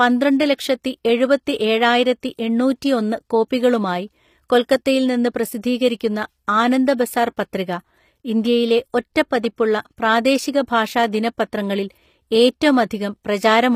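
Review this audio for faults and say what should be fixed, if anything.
Throughout, the s sounds are gritty and lispy and nothing sits above 15.5 kHz, likely HE-AAC compression near 24 kbps rebuilding the treble from copied lower bands. Re-encode at a higher bitrate, or with plain AAC, to keep the original treble.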